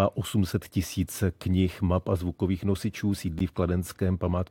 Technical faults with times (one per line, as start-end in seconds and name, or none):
3.39 gap between stream segments